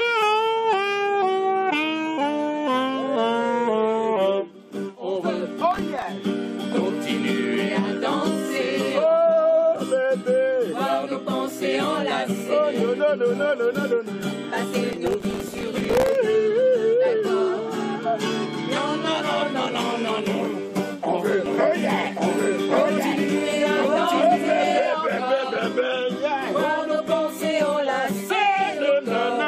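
From 5.61 to 6.02 s, and again from 14.93 to 16.15 s, processor overload crackle appears. The processor misses a run of very short buffer deadlines, on the order of a millisecond or two each, and each miss replays old audio with hard edges. This produces gritty tearing, with the second burst longer and denser.

At 20.68 s, damaged data in the compressed stream produces a brief glitch as the decoder loses sync and resynchronises on a later frame. A second blip of the same kind occurs at 23.12 s.

From 21.46 to 24.79 s, a doubled audio track is heard. A full-band copy, about as loud as the original, trails it by roughly a second. It has no decay or room colour, and it starts and stops abruptly. The cause is likely a second capture path or an edit holding two out-of-step copies.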